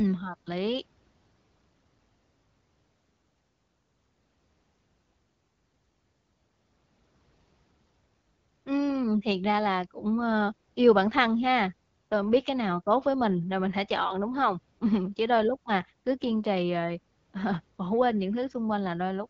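A speech recording with nothing technically wrong in it. It has gone through an AMR wideband (HD Voice) codec at 12.65 kbit/s, which keeps the speech clear while capping the audio bandwidth at about 7 kHz.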